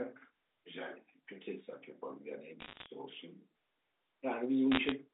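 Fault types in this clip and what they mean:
Bit errors on a digital phone line: brief bursts of sharp ticks and crackle at 2.60–2.86 s and 4.72–4.92 s over unchanged speech. Roughly 0.5–0.7 percent of bits in the G.711 A-law stream are flipped, each corrupting one sample; sign or high-bit hits cause clicks.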